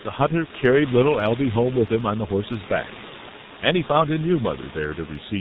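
From start to finish, the speech carries the heavy damage of the G.723.1 codec. Everything above 4 kHz is missing, so the speech sounds muffled, and the slow, frame-by-frame model of the voice leaves a hoarse texture with smeared consonants, which fits a rate near 6.3 kbit/s. A plain low-pass filter would dull the sound without that roughness. The room noise sits about 17 dB below the speech.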